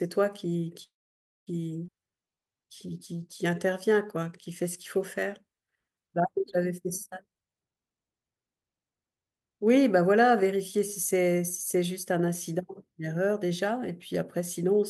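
At 0.83 s the speech stops and holds for about 0.65 s, until 1.49 s. A short tail of the last sound fades, then about 0.57 s is silent. This call audio freeze likely comes from delayed packets emptying the jitter buffer. Speech then resumes with nothing lost.

From 1.87 to 1.90 s there is a skip ahead. Around a third of a second of speech is dropped. The two sides join almost directly, with a brief fill of about 11 ms. The listener hears an abrupt jump forward.

From 1.98 to 5.21 s a jitter buffer slow-down sets in. The receiver repeats single pitch periods to rebuild its reserve. Speech runs at 92% speed, adding 263 ms. The pitch is unchanged, but sounds are drawn out.

From 9.43 to 10.52 s there is a jitter buffer speed-up. The buffer held too much audio, so the receiver cut short pitch-period pieces, roughly a tenth of a second in all. Speech runs at 110% speed at the same pitch. It sounds hurried.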